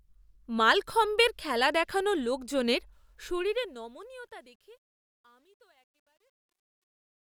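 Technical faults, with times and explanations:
2.92–7.31 s, truncation distortion on a fade: from "মালখম্বের খেলা দেখানো লোকজনের" the fade-out that starts around 3 s loses resolution, which fits about 11-bit truncation without dither. The waveform collapses into coarse steps, so from 4.36 s to the end the sound turns gritty.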